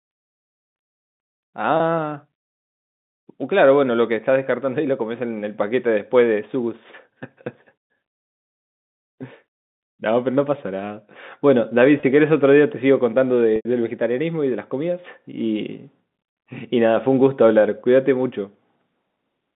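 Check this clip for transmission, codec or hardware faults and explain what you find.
Three short dropouts in the speech come from packet loss with pitch repetition, at 1.77–1.80 s, 12.00–12.03 s and 13.56–13.65 s. Data failed to arrive, and the receiver bridged each hole by replaying the most recent pitch cycle while fading it down. The two 30 ms gaps, each fitting a single lost packet, come across as a brief held buzz. The 90 ms gap, consistent with several packets in a row, lasts long enough for the repeated cycle to fade toward silence before the speech cross-fades back in. Beneath all of this runs the G.711 telephone band, with nothing above 4 kHz and only faint coding noise.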